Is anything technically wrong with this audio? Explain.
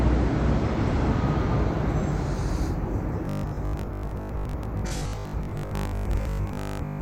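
Yes. From 3.25 s to the end, these everyday sounds take on robotic sound from repeated short buffers: a rigid metallic buzz at 50 Hz. That likely comes from audio arriving too slowly, so roughly half the signal is repeated 20 ms chunks replacing skipped audio.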